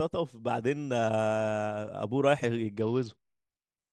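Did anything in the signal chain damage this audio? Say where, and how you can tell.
Yes. At the Bluetooth codec stage, a Bluetooth SBC bit pool drop starts at 2.81 s and lasts to the end. The speech loses its treble and gains a gritty quantisation hiss, which fits a bit pool cut from 31 to 9, roughly 72 kbps.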